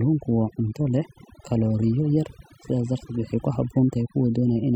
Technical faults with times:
0.00-4.75 overdone noise removal

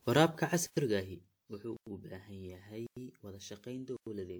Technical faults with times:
0.00-4.40 generation loss
0.67-0.77 gap between chunks
1.77-1.87 gap between chunks
2.87-2.97 gap between chunks
3.97-4.07 gap between chunks

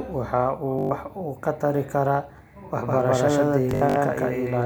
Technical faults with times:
0.79-0.91 Bluetooth stutter
2.77-4.65 doubled audio track
3.71-3.96 Bluetooth stutter

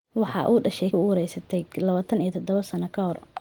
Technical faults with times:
0.91-0.93 skip ahead
1.01-2.37 jitter buffer speed-up

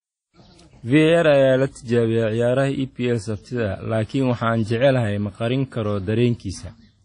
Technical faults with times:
0.00-7.04 WMA compression

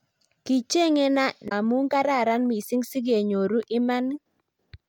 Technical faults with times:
1.45-1.52 damaged data in a compressed stream

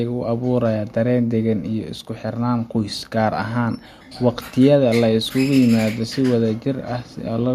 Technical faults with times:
none

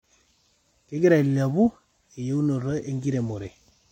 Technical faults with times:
none

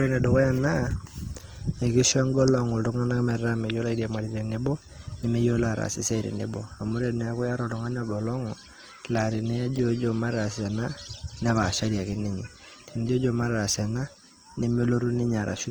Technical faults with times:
0.00-15.70 Opus compression

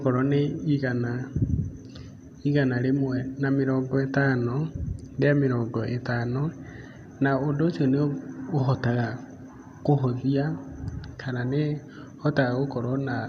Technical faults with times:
none

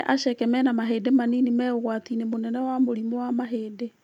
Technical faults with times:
none

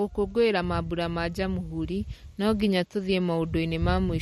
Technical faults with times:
0.00-4.21 MP3 compression

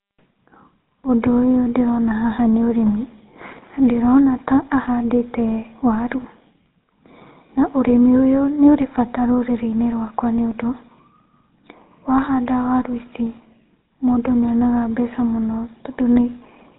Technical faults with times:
0.00-16.78 GSM full-rate codec
4.82-4.85 lost GSM frames

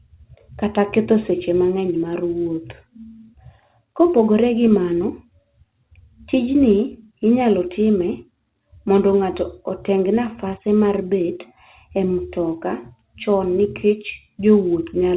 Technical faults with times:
none

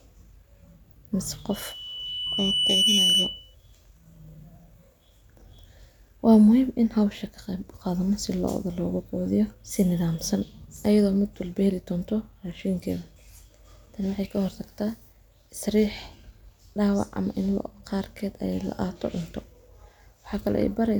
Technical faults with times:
1.50-3.55 loudspeaker feedback squeal

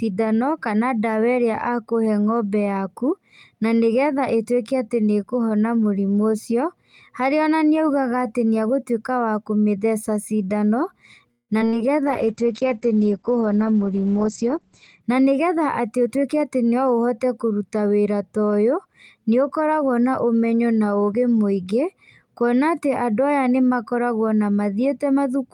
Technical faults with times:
11.31-11.74 repeated packet loss (robotic sound)
12.07-15.05 call bitrate drop
14.24-14.54 jitter buffer speed-up
15.02-16.41 jitter buffer speed-up

